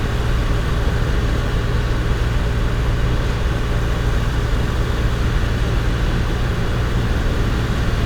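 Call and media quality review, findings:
Nothing stood out on listening to this audio.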